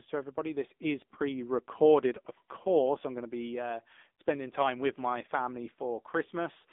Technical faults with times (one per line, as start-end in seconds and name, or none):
0.00-6.73 AMR narrowband mobile codec